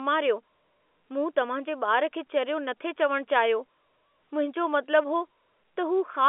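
No technical faults are audible.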